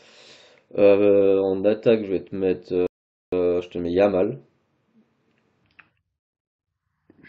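At 2.87 s the speech stops dead in a rebuffering stall: the player has run out of downloaded audio and waits for more. Silence holds until 3.33 s, adding about 0.46 s, and then the sound picks up exactly where it broke off, with nothing skipped. On a waveform this shows as a flat, empty gap cut cleanly into the signal. A spectrogram shows a blank vertical band with matching content on either side.

From 5.64 s to the end, the section plays at the wrong speed, at 0.69 times the original rate. Pitch and tempo fall together, so the speech turns deep and dragging, lowered by roughly seven semitones. The change is abrupt rather than gradual. The likely cause is playback or editing against a mismatched clock. A spectrogram shows the harmonics and formant bands shifted downward and the syllable patterns stretched wider in time. The waveform's envelope looks elongated from that point on.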